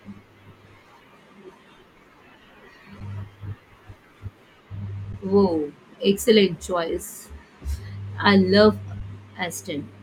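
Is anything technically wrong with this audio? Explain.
Yes. At 3.00 s, 5.13 s and 9.00 s (just after "I love"), the speech briefly freezes into a flat, silent-sounding hold of about 7, 11 and 11 ms, resuming softly. These are underruns with held sample: the output ran dry, the converter held its last value, and playback continued where it paused. The 11 ms gaps fit a 512-sample buffer.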